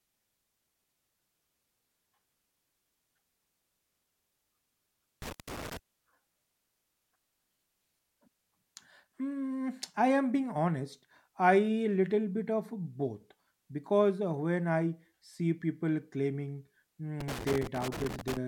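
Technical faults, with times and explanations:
5.22–5.77 s and 17.20–18.37 s (just after "I see people claiming"), loose connector crackle: a worn contact making and breaking chops the speech into irregular bursts of scratching. The waveform shows ragged dropouts and spikes; the spectrogram shows scattered broadband vertical streaks.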